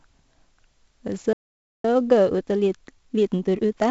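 Throughout, the speech is coded as 4-bit ADPCM, which fits a 64 kbps stream. Its coarse adaptive steps leave heavy gritty hiss riding on loud syllables.

At 1.33 s the output likely ran dry or was blocked. This playback stall cuts the speech to silence for about 0.51 s, until 1.85 s.

From 1.85 to 3.85 s, time-compressed catch-up splices out small pieces to clear the backlog, so the speech runs 1.25 times faster at unchanged pitch.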